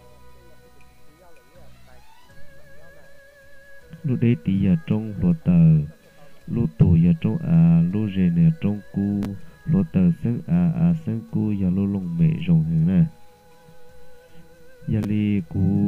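There's a brief jumble at 9.23 to 9.25 s and again at 15.03 s. That's chunks out of order: a 5.8 ms chunk lands late, three chunks behind at 9.23 and two at 15.03, so the audio is reshuffled with hard joins.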